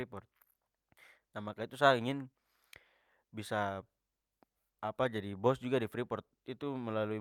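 At 0.98 s a skip ahead drops about a third of a second of speech; playback jumps forward with no gap, joining both sides almost directly. From 1.21 to 2.49 s a jitter buffer speed-up trims short pitch-period pieces, running speech at 109% speed at unchanged pitch, sounding hurried, shedding about a tenth of a second.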